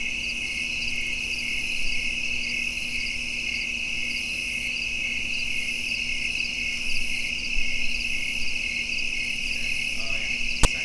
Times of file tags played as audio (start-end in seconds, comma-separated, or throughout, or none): 10.63